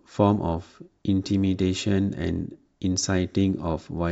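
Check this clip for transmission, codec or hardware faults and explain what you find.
Nothing wrong can be heard in the signal, and the speech comes through intact and continuous with no technical defect at any point.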